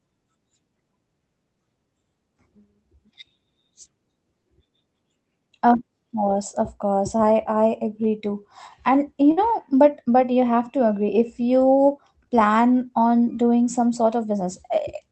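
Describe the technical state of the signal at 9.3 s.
At 9.31 to 9.40 s there is a burst of packet loss. The receiver holds the last sound and fades it, then resumes with about 60 ms missing.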